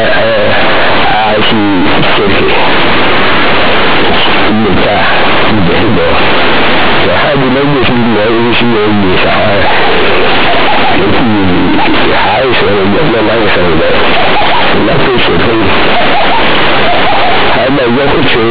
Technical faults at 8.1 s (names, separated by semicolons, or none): companded audio read as linear